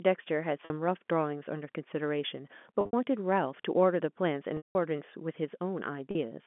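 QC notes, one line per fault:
0.65–0.70, 2.81–2.93, 4.57–4.75 and 6.11–6.15 s, packet loss with pitch repetition: dropouts of 50, 110 (scattered, longest run 70 ms), 180 and 40 ms, fitting 10 ms packets. The last pitch period gets looped, so short gaps buzz briefly. The 180 ms one fades to silence through narrowband telephone audio.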